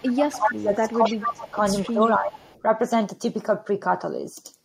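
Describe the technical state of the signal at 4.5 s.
At 4.5 s the speech signal is intact, with no audible fault at that point.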